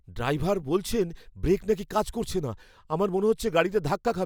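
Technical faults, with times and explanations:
No technical faults are audible.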